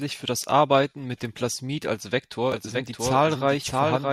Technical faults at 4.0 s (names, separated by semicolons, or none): doubled audio track